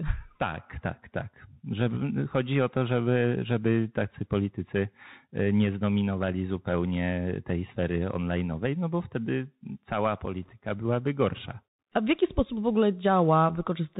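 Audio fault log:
throughout, Bluetooth CVSD headset codec: the speech is squeezed into a narrowband headset link, so nothing above 4 kHz survives. Sibilants come out scratchy, loud bright bits smear as the one-bit step size can't keep up, and a grainy hiss sits underneath, consistent with a 64 kbps CVSD stream.
1.91 s and 10.43 to 10.55 s, bit errors on a Bluetooth voice link: a brief rushing crackle lands after "tak tak", then a longer one between "no bo wtedy cała" and "byłaby gorsza". Flipped bits at roughly one percent each nudge the waveform, so you get noisy grit rather than sharp clicks.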